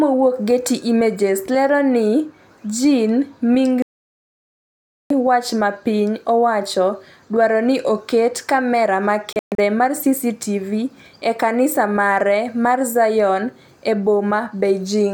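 Digital broadcast dropouts silence the speech from 3.82 to 5.11 s, then in brief scattered holes between 9.33 and 9.59 s. Failed frames were muted, so the programme skips ahead rather than pausing.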